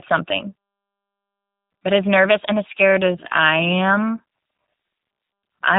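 From the start, the speech carries G.729 codec damage. Nothing is heard above about 3.8 kHz, and the voice has a rough, buzzy, synthetic edge. That points to 8 kbit/s coding, which rebuilds each 10 ms frame from a vocal tract filter, pitch predictor and a few pulses.

At 2.78 s, just after "as nervous and as", the pace abruptly drops to about 0.61 times normal speed and stays there to the end, while the pitch does not fall. This is likely a time-stretched section, where software repeated short pieces to lengthen the audio without shifting pitch.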